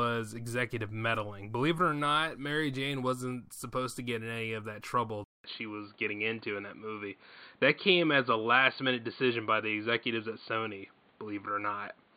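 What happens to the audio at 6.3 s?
By 6.3 s the speech has gone dull and boxy: from 5.24 s, just after "any of that trouble", through to the end, the input likely switched to a poorer device. After a 200 ms silence, nothing is heard above 4.6 kHz, a faint new noise floor appears, and the level stays much the same.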